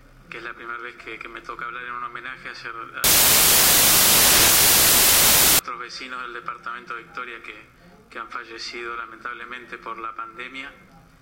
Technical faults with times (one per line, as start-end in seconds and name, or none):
3.04-5.59 samples built from the wrong bytes